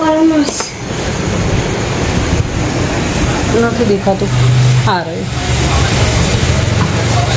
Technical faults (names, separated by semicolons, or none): gain pumping